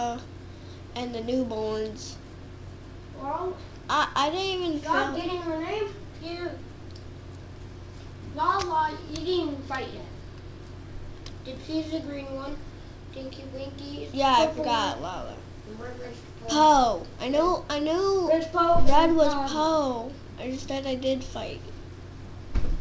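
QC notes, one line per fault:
The signal has passed through a WebRTC call path with a wideband codec that leaves no content above 8 kHz, consistent with G.722 at 64 kbps, and no faults are present.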